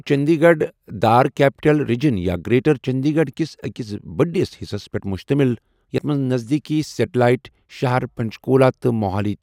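At 5.95 to 5.98 s, right after "بڈِس حصس پیٹھ مٗشتمِل", the speech is broken by damaged data in a compressed stream. For about 30 ms the decoder is fed bytes that no longer form valid frames, so it either misinterprets them or discards them, then hunts for the next intact frame header to regain sync. The result is a brief disruption in place of the speech.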